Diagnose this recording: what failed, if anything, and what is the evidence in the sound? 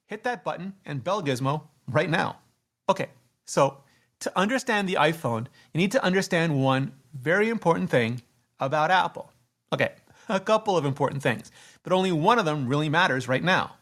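The failure is in call processing: a microphone volume step-up at 1.23 s, where the speech and the room noise behind it jump together by about 5 dB. The call software judged the input too quiet and raised the device's input gain in one abrupt step.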